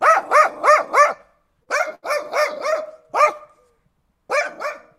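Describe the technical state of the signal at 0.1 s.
The signal at 0.1 s is intact, with no audible fault at that moment.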